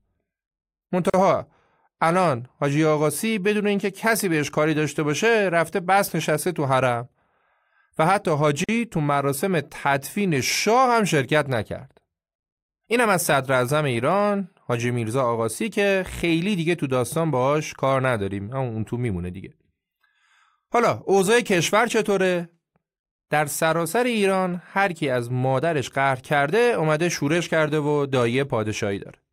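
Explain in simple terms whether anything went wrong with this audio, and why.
Two short dropouts break the speech: at 1.10 s for about 40 ms and at 8.64 s for about 45 ms. That's a gap at a join of encoded pieces. The audio was encoded in chunks and stuck together, and each chunk's built-in padding of silence stayed in.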